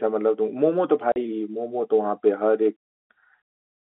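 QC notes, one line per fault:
1.12 to 1.16 s, packet loss filled with silence: a 40 ms gap of dead silence with hard edges, which fits two lost 20 ms packets. Unlike concealed loss, nothing is repeated or smoothed, and the G.711 telephone band resumes unchanged.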